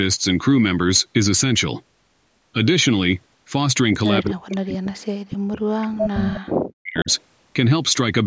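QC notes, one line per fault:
4.22–7.1 s, speech suppressed in double talk: the echo canceller, likely unable to separate the near talker from loudspeaker echo while both sides spoke, pulled the speech down. The speech dips, at its deepest by roughly 40 dB, across about 3 s.
4.5–4.55, 5.98–6.02, 6.33–6.37 and 6.99–7.21 s, echo leak: loudspeaker pickup likely slipped past the canceller and was sent back. Short scraps of the speech return 260 ms late, mostly about 15 dB below it, but near 5 dB below at 5.98 s.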